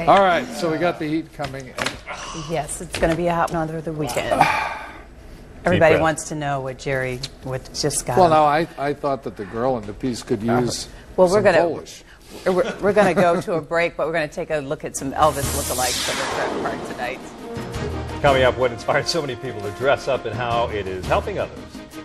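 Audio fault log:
3.52 s and 18.88 s: compressed frames skipped. At each point whole coded frames of 26.1 ms never reach the output, so the sound jumps ahead by about 70 ms (roughly three frames) at 3.52 s and about 50 ms (roughly two frames) at 18.88 s, leaving a short jolt at the join. On a spectrogram each shows as a vertical seam where patterns break off and resume out of step. The waveform shows an abrupt envelope discontinuity there.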